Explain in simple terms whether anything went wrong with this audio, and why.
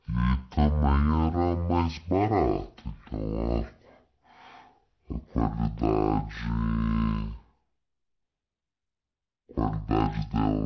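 Something did go wrong here, for the whole clip: a wrong sample rate. The speech plays at half speed and a full octave low, so it sounds slow and deep. That happens when audio is played back at half the rate it was recorded at, likely 16 kHz instead of 32 kHz.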